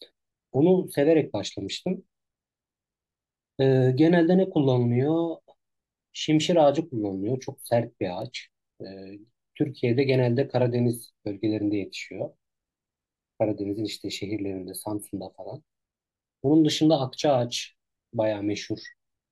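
At about 8.22 s there's a bit error spike, a single sharp tick that has nothing to do with the speech around it. What likely happened is one bit flipped somewhere in memory or on a digital link, so a lone sample jumped by a power of two and then snapped straight back. The click is so brief it sounds like just one sample. It peaks around -28 dBFS, and because it's so short its energy spreads across the whole spectrum instead of sitting at any pitch.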